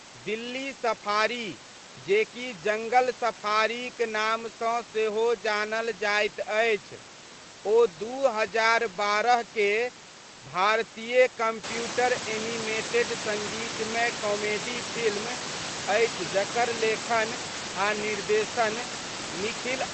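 No faults to report: the room noise steps up by about 12 dB around 11.5 s to sit roughly 8 dB under the speech, and the top end rolls off near 8 kHz as expected from the call codec.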